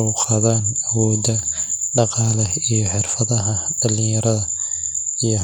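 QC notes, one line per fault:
Nothing stood out on listening to this speech recording.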